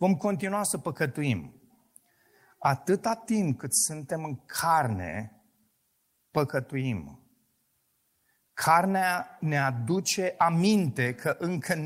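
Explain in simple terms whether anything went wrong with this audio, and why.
Nothing went wrong with this audio, because no fault can be heard anywhere in the speech.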